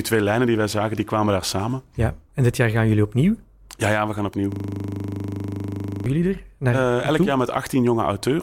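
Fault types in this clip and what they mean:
System hang loop: the system froze while the hardware kept replaying one 40 ms buffer. After "ja we gaan opnieuw" it sounds like a steady 25 Hz buzz.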